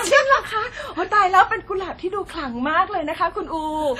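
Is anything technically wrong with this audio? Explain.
Yes: throughout, the speech rings and smears with breathing hiss and nothing above 14 kHz, likely heavy WMA compression, fitting a low bitrate around 32 kbps, with coarse long-block quantisation.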